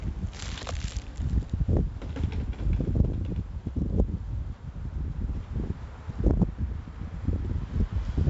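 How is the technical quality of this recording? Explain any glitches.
The recording has clearly audible coding damage throughout. 4-bit ADPCM compression runs the whole clip: each sample is coded as a coarse 4-bit step from a prediction, so the error rides as gritty hiss on every loud passage and smears sharp attacks. Nothing is present above 7.7 kHz, which dulls the top end and fits a rate near 64 kbps.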